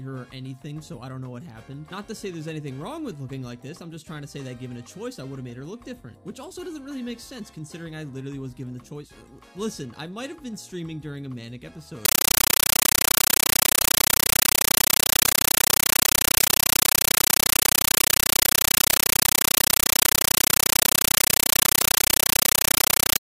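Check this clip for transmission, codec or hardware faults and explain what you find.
One fault is present: a compressed stream played as audio, from 12.05 s to the end. The sound is replaced by very loud, harsh static that chatters at about 31 bursts per second, each burst roughly 9 ms of noise followed by silence. The likely cause is a Dolby Digital (AC-3) bitstream on a digital link being treated as ordinary samples instead of decoded. Each data frame becomes a noise burst plus zero padding, and the pattern fits a 448 kbps stream.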